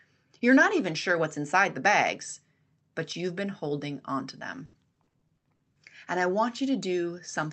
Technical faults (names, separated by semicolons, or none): repeated packet loss (robotic sound)